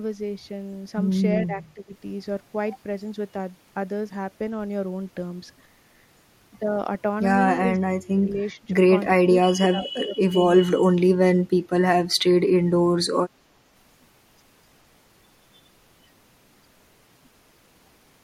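At 1.47 to 1.94 s, 7.79 to 7.89 s, 8.13 to 8.74 s, 9.32 to 10.22 s and 10.66 to 11.02 s, the speech sinks or breaks up in pieces. This is speech suppressed in double talk, most likely an echo canceller that could not separate the talker from the far side's loudspeaker echo and turned both down. The dips are moderate early and deepen to roughly 35 dB near 11 s.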